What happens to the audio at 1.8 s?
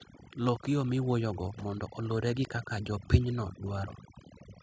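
At 1.8 s the level is partway through an automatic gain rising that runs from 0.38 s to 2.58 s. The automatic gain control judged the input too quiet and raised its gain smoothly, by about 4 dB over that stretch. Voice and background swell together over more than two seconds, which tells it apart from a compressor's pumping: there the background surges up in the gaps while the voice is held down, and it recovers within a fraction of a second.

The same moment also carries the overdone noise removal present through the whole clip. A noise reducer set too strong shuts off individual frequency bands whenever they sit near its noise estimate, taking quiet parts of the voice with them. The background drops and breaks up into twinkling specks. Unlike low-bitrate codec smearing, the damage follows the noise floor, so the soft, quiet parts suffer most.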